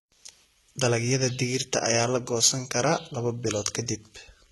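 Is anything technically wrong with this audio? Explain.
Yes. Throughout, the treble is synthetic up to a cut-off at 11.8 kHz, heavily damaged, likely HE-AAC compression around 16 kbps: copied bands replace the highs, so sibilants sound gritty and metallic.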